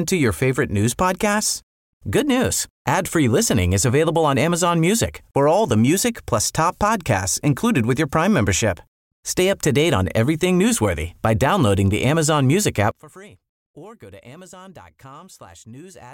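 From 12.91 s to 16.14 s, the speech falls by about 23 dB to a faint copy, its centre cancelling away. The likely cause is one channel inverted: one stereo side has reversed polarity, so content common to both cancels when they are summed to mono.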